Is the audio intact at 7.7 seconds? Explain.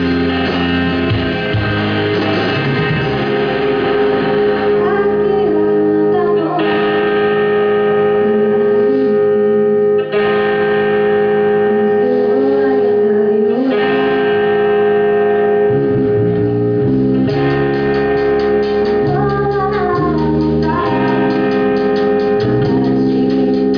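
Yes, the audio at 7.7 seconds is intact, with no dropout, click, distortion or other fault to be heard at that moment.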